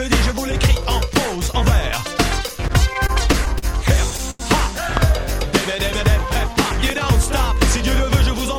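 Repeated stalls (stutter) run from 2.47 to 3.65 s. Packets arrive late or more slowly than they are played, so the jitter buffer empties eight separate times. Each time, the receiver extends the last sound to cover the wait, about 132 ms in all, and the longest wait is 39 ms. Nothing is lost, but about 11% of that stretch is filled-in sound, so the audio drags and stutters in small hitches.

A short stall from a late packet follows at 4.30 to 4.42 s. One packet misses its playout time and the buffer runs dry. The receiver holds the last sound for 89 ms until the packet turns up, then resumes from the same point. No audio is skipped, but the held sound lingers audibly with a faint buzzy flatness. Afterwards the playback delay sits 89 ms later than before.

A loud pop strikes at 4.97 to 4.99 s. It is a single sharp click riding about 15 dB above the surrounding sound, which carries on beneath it. 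The likely cause is a sudden voltage step from a plug, switch, static discharge or driver glitch entering the signal path. A second loud pop at 6.90 to 6.92 s is the same kind of isolated transient, about 10 dB above the sound.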